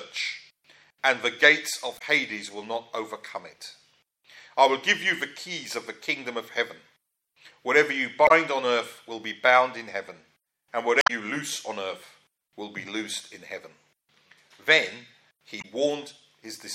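Damaged data in a compressed stream breaks through the audio four times: 1.96 to 2.02 s, 8.25 to 8.31 s, 10.99 to 11.10 s and 15.59 to 15.65 s. Each lasts roughly 60 ms, with the third nearer 120 ms. At those points the encoded bytes no longer make sense, so the decoder misreads or drops the affected frames, loses its place and hunts for the next valid frame header, leaving a brief chirp or blip each time.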